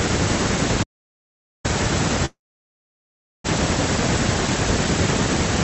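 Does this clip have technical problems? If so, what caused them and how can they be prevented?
Yes. An audio dropout to silence runs from 0.83 to 1.65 s. The sound stops mid-flow and the gap is silent, with no room tone beneath it, so about 0.81 s of speech is simply gone. The likely cause is that the input feeding the recorder was briefly lost, through a loose connection, a link failure or an accidental mute, while the recording carried on writing silence. Secure cabling and device links, and monitor input levels during recording, to prevent this.

A call audio freeze follows from 2.25 to 3.46 s. The last sound is stretched into a short fading buzz or hiss that settles into about 1.1 s of silence. Speech then resumes exactly where it stopped, so nothing is lost, but roughly 1.2 s of extra delay has been inserted. This is likely a stall in packet delivery that emptied the receiver's jitter buffer on this call path, whose audio is band-limited at 8 kHz. 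Use a more stable, less congested network connection, with wired links or better Wi-Fi, to prevent this.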